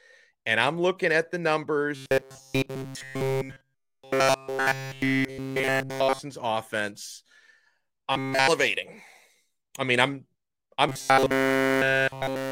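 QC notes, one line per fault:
1.96–6.19 s (after "I'm looking at the"), 8.13–8.48 s and 10.89–12.52 s (after "I mean I'm I'm"): robotic sound from repeated short buffers. The speech becomes a rigid metallic buzz locked at 134 Hz, following the original only roughly. This is likely a 7.5 ms buffer replayed over and over while new audio is skipped.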